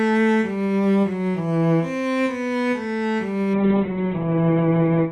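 At 3.54 s a call bitrate drop sets in and lasts until the clip ends at 5.1 s. The encoder was forced from a rich rate down to a starved one, consistent with roughly 128 kbps falling to about 7 kbps. It coded everything coarsely and cut the top end from 20 kHz to 4 kHz. The sound turns muffled and rough at once. Unlike packet loss, there are no gaps or dropouts. Unlike a simple low-pass filter, the remaining band is also grainy and watery.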